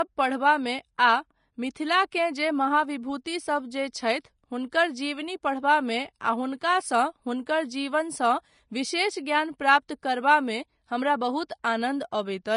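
Across the whole speech the sound is hissy and grainy, with nothing above 10.5 kHz. The likely cause is Vorbis compression at a low quality that fits roughly 33 kbps: fine treble detail is coarsely quantised into noise, and the top of the spectrum is cut away.

A brief hiss leads into sharp attacks at 0.98 s, then at 11.63 s and 12.11 s, both just after "प्राप्त करबामे हमरा बहुत". This is pre-echo: quantisation noise sized for each loud onset is spread back across its block, smearing roughly 10 to 16 ms before the attack.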